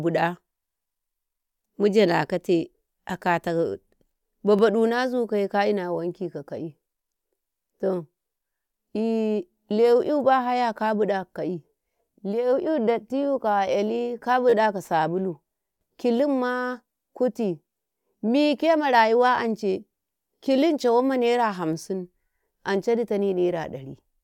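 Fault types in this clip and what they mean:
Repeated buffer: a click at 4.59 s and a brief buzz at 14.50–14.53 s, as an 11 ms slice replays when new audio arrives late.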